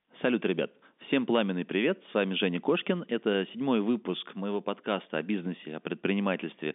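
Nothing goes wrong anywhere in this speech, which simply carries the narrow telephone band you'd expect from G.711 coding, running from about 200 Hz up to 3.6 kHz.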